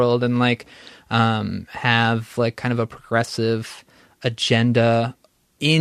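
Nothing in this speech recording stands out as a technical fault, so there's really nothing to flag here.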